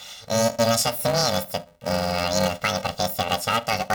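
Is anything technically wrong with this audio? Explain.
Yes. Throughout the speech there's planar audio read as interleaved. Each block of about 2.9 ms, which fits 128-sample blocks, gets read as alternating pairs. With blocks that short you get a robotic buzz at around 345 Hz rather than a clear octave jump.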